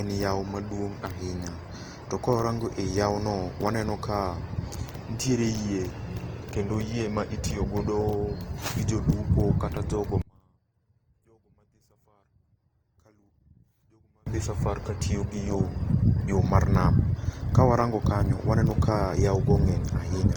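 Throughout, the speech was likely encoded at a low bitrate and then saved again at a high one, fitting a chain from Opus at 24 kbit/s to 320 kbit/s MP3. The first encoding's artefacts remain, with nothing above 20.2 kHz.

From 10.22 to 14.27 s, one channel is likely inverted. Summed to mono, the shared centre cancels and the speech drops by about 37 dB to a faint remnant.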